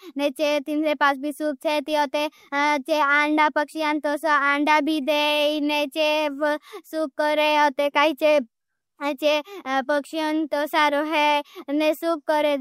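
No technical faults can be heard in the signal at any point in the recording.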